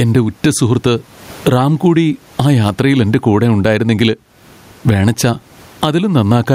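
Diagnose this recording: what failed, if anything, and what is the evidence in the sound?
Throughout, the gain swings around 20 dB: gain pumping, likely excessive mic gain hitting a fast limiter.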